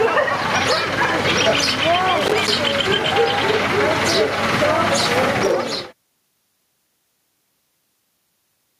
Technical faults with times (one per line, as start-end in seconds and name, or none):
0.00-8.80 gain pumping
2.18-2.50 loose connector crackle
5.40-5.52 loose connector crackle